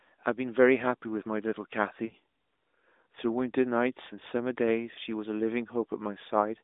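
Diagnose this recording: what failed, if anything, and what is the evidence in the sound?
The failure is on the radio link: lost AMR speech frames at 2.06 to 2.13 s. For 40 ms, which fits two 20 ms frames, the decoder replays its last pitch and vocal-tract settings at falling gain, so the speech smears and dips briefly.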